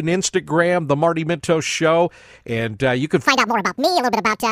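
From 3.26 s to the end of the clip at 4.52 s, the speech runs at the wrong speed. The section plays 1.78 times faster than it was recorded. Pitch and tempo rise together. The voice jumps up by roughly ten semitones and sounds squeaky and rushed. The change is abrupt, not gradual. The likely cause is playback or editing against the wrong clock, so the samples are read out too quickly.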